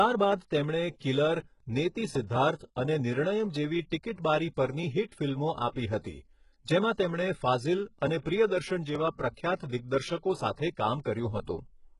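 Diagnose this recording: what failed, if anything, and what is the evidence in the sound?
The codec stage failed. The whole recording has likely passed through HE-AAC compression at a very low rate, and the heavy damage fits something around 12 kbps. Nothing survives above 11.1 kHz. The treble that remains is not the original signal. It was rebuilt by spectral band replication, which copies lower bands upward under a coarse envelope. Because those copied harmonics do not line up with the real ones, s sounds in the speech come out gritty, metallic and lispy.

The same codec also produces pre-echo. It spreads quantisation noise across each transform block, so when a sharp onset lands late in a block, noise sized for the loud part leaks into the quiet moment before it. You can hear a brief hiss ahead of attacks at 0.98 to 1.01 s, lasting about 27 ms. It happens again at 6.00 to 6.04 s, lasting about 46 ms, just after "પરની હિટ ફિલ્મો આપી", and once more at 10.56 s. 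Each of these onsets sounds softened and smeared.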